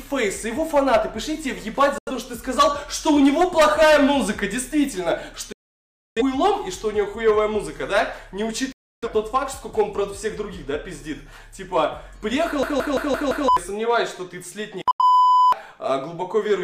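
Digital broadcast dropouts at 1.98 s, 5.52 s and 8.72 s: the receiver lost valid frames and muted, cutting the sound to silence within about 3 ms. The holes last about 85 ms, 640 ms and 300 ms, and that audio is gone.

System hang loop from 12.63 to 13.48 s: the machine froze while the hardware kept replaying its ring buffer. A 170.67 ms slice, which fits an 8192-sample buffer, repeats five times at 5.86 Hz as a machine-gun stutter, losing about a second of audio.

Another digital broadcast dropout at 14.91 s mutes the sound for about 85 ms with the same abrupt cut.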